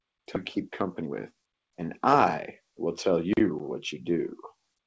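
Speech over a call path, G.722 by the sound of it, with nothing above 8 kHz. Around 0.36 to 0.38 s there's a skip ahead: something like 0.7 s of audio gets dropped, probably by the jitter buffer when it overflowed, and the two sides are spliced together with no gap, so the talker seems to leap forward. Then come two stretches of jitter buffer speed-up. From 0.57 to 2.14 s playback runs at about 110%, and from 2.86 to 3.94 s at about 108%. The receiver is trimming out short pitch-period chunks to shed excess buffered delay, so the speech sounds a bit rushed while the pitch stays the same.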